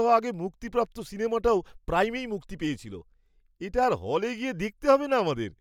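Listening through this speech recording, nothing stood out as a technical problem at any point.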